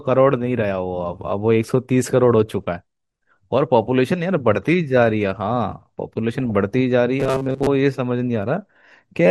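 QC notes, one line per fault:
Throughout: MP2 compression. The speech sounds dull and muffled, with a gurgling, grainy edge. The cause is likely a low-rate MPEG Layer II encode, and the damage fits something near 80 kbps. At that rate the encoder cannot feed all of its sub-bands. Upper bands drop out and flicker back. The bands that remain are coarsely quantised. That gives the granular texture heard under the whole clip.
6.40 to 6.74 s: DAB burbling. For about a third of a second the speech is marred by burbling. Bit errors have slipped past error correction into the MP2 data. The error rate is low, around half a percent, but enough to corrupt many frames in a row. Bad samples put short blips of noise in single sub-bands, and bad scale factors make sub-bands leap in level for up to a frame.
7.20 to 7.67 s: robotic sound from repeated short buffers. The speech turns into a rigid metallic buzz near 133 Hz. 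It still roughly tracks the syllables. The cause is likely audio arriving too late, so playback loops the last short buffer. A repeat rate of 133 Hz fits a buffer of about 7.5 ms. Most of the real audio in this stretch is skipped and replaced by repeats. The fixed repeat rate imposes that steady, artificial pitch.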